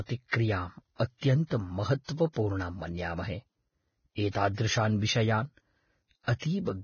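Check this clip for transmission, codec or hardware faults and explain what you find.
One fault runs through the whole speech clip: Vorbis compression, likely at a low bitrate. Nothing remains above 6.6 kHz, and the treble left below that cut-off is quantised so coarsely that sibilants turn hissy and grainy, with smeared consonant onsets. A spectrogram shows a hard ceiling at 6.6 kHz and speckled, noisy upper bands in place of clean harmonics.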